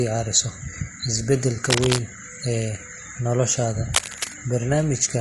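Speech that sounds rough and grainy throughout, with a hiss-like texture filling the gaps between the voice's harmonics and a top band that sounds thin and somewhat synthetic. That character points to low-delay AAC compression, likely AAC-ELD as used in video calls, at a bitrate that sounds like about 32 kbps. Its very short frames cannot separate closely spaced pitch harmonics well, so at this bitrate the coder smears noise between them and only approximates the highs. From 1.55 to 1.59 s the audio briefly turns smeared and phasey, a momentary blurred patch rather than a gap. This is AAC frame loss with concealment. The damage fits a single lost frame of about 20 ms, which the decoder papered over by reusing and scrambling the last good spectrum instead of leaving silence. Two bursts of dense, uneven scratching and rustling then sit over the sound, from 1.70 to 2.01 s and again from 3.94 to 4.32 s, each roughly as loud as the speech itself. 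These are cable scratch noise. A worn cable, connector or control being moved likely makes its contact resistance jump erratically, and those rapid changes come through as ragged noise bursts that last only as long as the movement.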